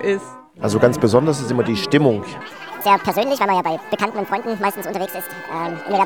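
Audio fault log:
2.41 s to end: section at the wrong speed. From here the sound runs 1.7 times too fast, so it hurries and rises about ten semitones together, likely from playback on a mismatched clock. A pure pitch shift would keep the timing unchanged.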